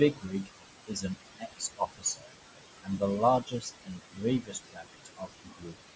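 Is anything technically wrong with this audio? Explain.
Yes. A noise suppressor runs across the whole clip, pulling down what it judges to be steady background by about 20 dB. It works frame by frame, lowering each frequency band it classes as noise. Against room noise only about 8 dB below the speech, this leaves a residue that swells under the words and sinks between them.

The same suppressor also mistakes parts of the speech for noise, causing speech cut by the noise suppressor at 0.13 to 0.49 s, 0.87 to 1.18 s, 1.38 to 2.3 s, 2.83 to 3.02 s, 3.42 to 4.24 s and 4.42 to 5.76 s. It turns soft consonants, word endings and quieter stretches down along with the background, by about 17 to 21 dB at the deepest. The affected portions range from a brief moment to about a second at a time, and they sound swallowed or faint.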